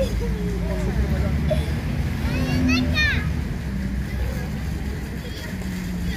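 No technical fault can be heard anywhere in the clip. The audio runs its whole course without a dropout, click or glitch.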